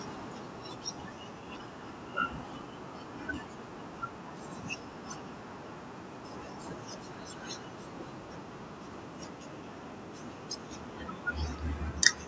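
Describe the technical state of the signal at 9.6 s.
At 9.6 s the speech signal is intact, with nothing beyond the usual call microphone processing, which trims the lowest bass and leaves no content above 8 kHz.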